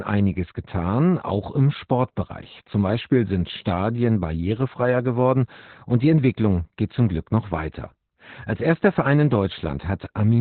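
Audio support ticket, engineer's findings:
Opus voice compression, whole clip: encoder at very low rate, SILK-only narrowband, nothing above about 4.3 kHz. Coarse excitation coding, heavy damage. Speech muffled, hoarse, slightly robotic; band limit fits roughly 8 kbps. Probable component: codec bitrate setting.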